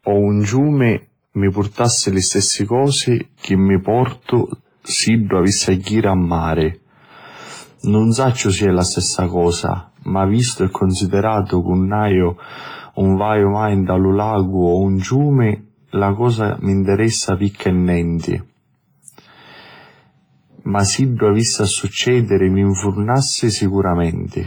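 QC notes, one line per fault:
Throughout, hard clipping: peaks driven about 2 dB past the limit are cut flat on under 1% of samples, adding high harmonics heard as crackle on loud moments.
Throughout, WMA compression: heavy codec damage gives ringing, washy speech with hiss that breathes with the signal, likely from WMA encoding at a low bitrate around 24 kbps.
14.98–15.02 s, 17.50–17.55 s, 18.19–18.23 s, pre-echo: quantisation noise spreads 36, 51 and 45 ms ahead of attacks, so hiss precedes each onset and the attack sounds smeared.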